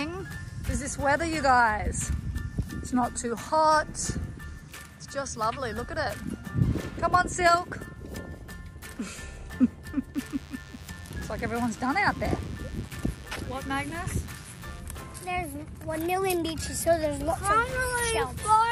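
From about 10.14 s to 14.81 s there's a thin, steady buzz sitting well under the main sound, roughly 25 dB down. That's classic DECT cordless phone buzz. A DECT handset or base nearby is firing a short radio burst every 10 ms, and something in the audio path rectifies it, so you get a 100 Hz buzz packed with harmonics. It stops at 14.81 s.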